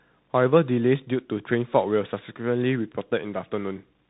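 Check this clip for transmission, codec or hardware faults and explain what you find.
There's one fault, and it runs through the whole recording: tandem speech coding. The speech sounds like it passed through a speech codec, was decoded, then coded again, which fits two CVSD stages at 64 kbit/s with a G.711 mu-law hop between them. The second CVSD coder is working on the first one's already-roughened output, so the errors stack. You hear a gritty, noisy texture and a muffled, phone-band top end with nothing above about 3.8 kHz.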